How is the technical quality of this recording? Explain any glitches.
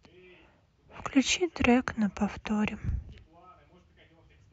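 One glitch stands out in this speech recording. A DC step occurs at 2.89 s: the waveform's zero line suddenly jumps by about -36 dBFS, then drifts back as a 5 Hz high-pass filter bleeds the offset away. The abrupt shift is heard as a brief low thump, while the speech carries on unchanged.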